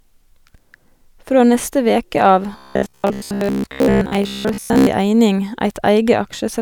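From 2.53 to 4.88 s the speech collapses into robotic sound from repeated short buffers. It's a stiff, metallic buzz pitched at 66.8 Hz that still loosely tracks the talking. What's likely going on is that fresh audio isn't arriving often enough, so the playback keeps looping the last chunk of roughly 15 ms, which matches that buzz frequency, and skips the real material underneath. Most of that stretch, something like two thirds or more, is repeats rather than new sound.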